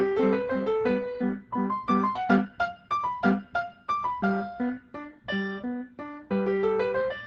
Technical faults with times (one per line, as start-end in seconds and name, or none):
2.15-2.17 skip ahead
2.25-3.61 jitter buffer speed-up